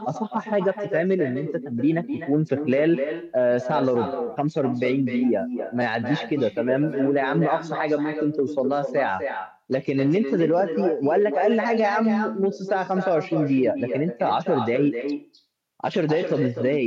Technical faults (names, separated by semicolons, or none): echo with no canceller